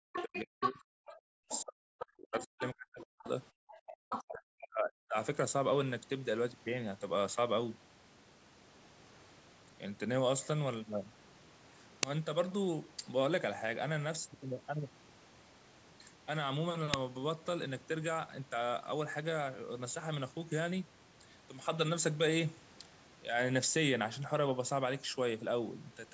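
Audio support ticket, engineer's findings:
Speech suppressed in double talk, 0.00–3.27 s and 3.68–5.17 s: talker's voice drops by up to about 40 dB. Likely echo canceller failing to separate near talker from loudspeaker echo, attenuating both.

Other side's voice leaking through, 0.15–0.40 s, 0.61–0.70 s, 1.50–1.63 s, 3.69–3.93 s, 4.10–4.22 s: short scraps of a second voice, between about 15 dB below and level with the talker. Likely residual loudspeaker echo not cancelled from the mic.

Uninitialised buffer, 12.03 s and 16.94 s: brief loud cracks, each about 2.9 ms, which fits a 128-sample block played out before being written with audio.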